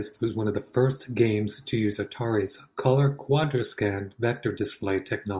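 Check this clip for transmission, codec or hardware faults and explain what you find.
No faults were found.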